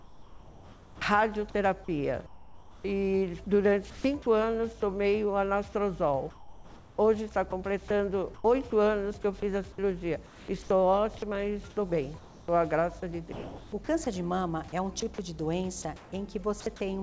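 From 0.0 to 4.26 s the background is replaced in places by comfort noise. About 1.8 s of the real ambience gives way to a flat, featureless hiss, likely because the sender's voice detector judged the stretch silent and stopped transmitting, leaving the receiver to synthesise noise. On a spectrogram those patches show as smooth, evenly textured bands with none of the small transients of the genuine background. In the waveform they form a steady, uniform envelope. Like the rest of the clip, they stop sharply at 8 kHz, which fits a G.722 call path.

At 4.22 to 4.26 s comes sound dropped by the voice detector. A 40 ms stretch is filled with comfort noise, and about 20 ms of actual sound is lost. The likely cause is that the detector mistook a quiet onset or tail for background. To the ear it is a tiny gap where the sound seems clipped. A spectrogram shows a narrow vertical slot of bland noise breaking the signal's structure, and the waveform changes briefly to an even level.

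From 6.30 to 16.66 s the sound is chopped by the voice detector. Transmission switches on and off repeatedly, and about 2.3 s in total is swapped for comfort noise, likely as the detector kept toggling on quiet passages. The result is choppy, with edges and soft moments cut away. On a spectrogram, detailed regions alternate with featureless noise blocks. The waveform shows abrupt steps between the natural envelope and flat fill.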